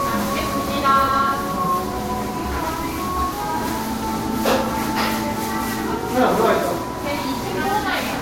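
Generation loss runs throughout. It likely comes from about three lossy encode passes, fitting a Vorbis chain near 63 kbit/s. Each pass quantised on a new frame grid, stacking noise and spectral holes. The sound swirls, smears and turns hollow. Attacks blur.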